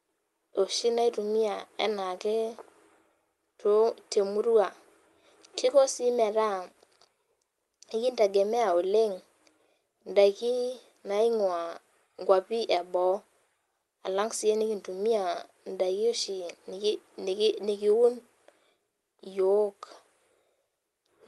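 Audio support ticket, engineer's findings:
Had a good listen to this speech recording and found nothing to flag; the audio went over a call path with the Opus codec, and that path is doing its job as expected.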